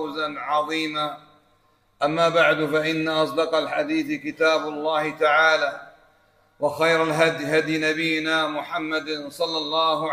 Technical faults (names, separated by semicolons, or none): none